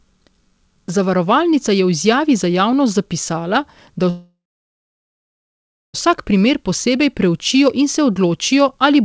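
At 4.10 s the speech halts: the last sound is stretched into a short fading buzz, then about 1.56 s of silence, until the speech resumes at 5.96 s exactly where it broke off, now running about 1.84 s later. This is a call audio freeze, likely from packets held up in transit so the jitter buffer ran dry. Unlike a dropout, nothing is lost; a gap is inserted, heard through audio band-limited to 8 kHz.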